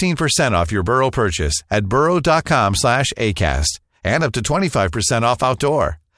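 No technical faults can be heard at any point in the speech recording, and the signal stays steady and continuous from its first moment to its last.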